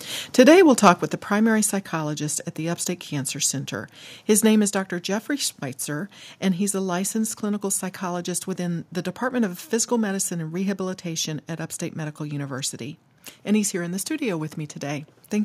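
From 0.86 to 0.90 s the signal shows microphone overload, most likely because the input gain was set high enough that peaks drove the converter about 3 dB past its ceiling. The tops of those waveform peaks are sheared flat across a small fraction of samples, so the loudest moment of the speech gets a brief, harsh, crackly edge rather than a clean rounded peak.

At 1.02 s, just before "the primary psychologist at", the microphone volume is stepped down, likely by the call software reacting to that clipped peak and lowering the device's input level in one move. Voice and room background both drop abruptly by about 6 dB. A second, smaller step at 4.68 s, right after "name is", cuts the level by about 2 dB, heard as a slight but sudden dip in loudness.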